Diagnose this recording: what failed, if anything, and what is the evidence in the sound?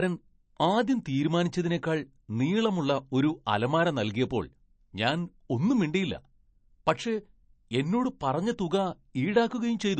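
MP3 compression throughout, at the codec stage: nothing above 8.3 kHz and plainly swirly speech, likely an encoder starved of bits, fitting a 37 kbps bitrate.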